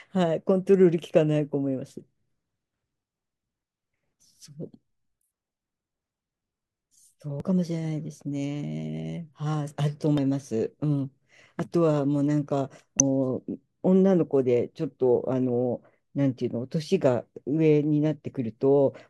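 Speech recording with damaged data in a compressed stream: corrupted frames make the decoder lose sync, producing brief glitches at 7.40, 10.18 and 12.99 s.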